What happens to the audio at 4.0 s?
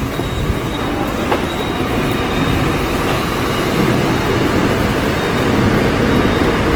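Dropped samples at 4.02 s produce a single sharp click in the everyday sounds. A fraction of a millisecond of the stream is likely missing, so the waveform jumps from one value straight to a later one. Too little is lost to remove anything audible, but the sudden step in the signal splashes energy across the whole spectrum. It is heard as one brief tick and appears as a thin vertical line through every frequency.

Opus compression underlies this moment as well, as it does the rest of the clip, and its damage is plainly audible. The grainy, rough texture is likely from Opus running in its music mode at 16 kbps. With so few bits, the encoder keeps each band's overall energy but fills in the detail with folded copies of lower bands or noise. Tonal parts therefore turn grainy and noisy rather than swirling. The bandwidth stays full, with content reaching about 20.2 kHz.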